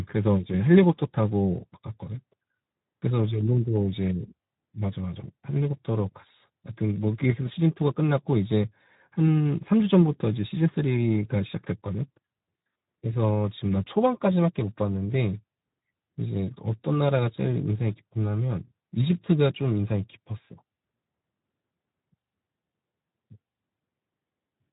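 From start to end, Speex codec damage makes the speech hoarse and noisy, which fits a low setting around 11 kbps; a spectrogram shows nothing above 3.8 kHz.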